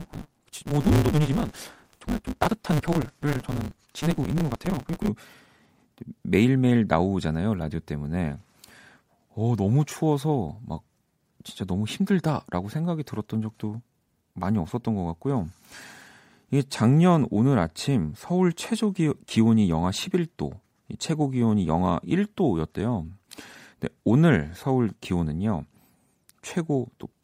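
From the start to about 5.09 s, a steady 150 Hz buzz sits under the speech, which runs about 1.6 times too fast at near-normal pitch. This is a block size mismatch (truncated): each 512-sample block loses its tail, consistent with the next stage reading only about 320.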